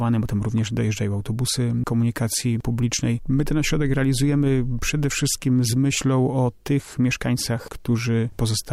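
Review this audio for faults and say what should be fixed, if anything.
Nothing stood out on listening, so there is nothing here that needs fixing.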